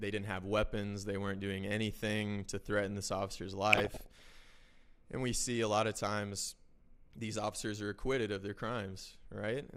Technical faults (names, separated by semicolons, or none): DAB burbling